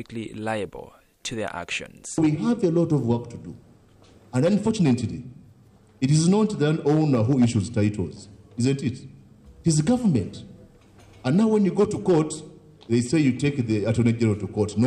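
No technical faults are audible.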